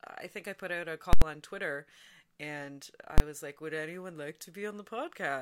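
A calculation produced invalid numbers at full scale, pinning the output to maximum: loud pops around silence from 1.13 to 1.22 s, then one bang at 3.18 to 3.20 s.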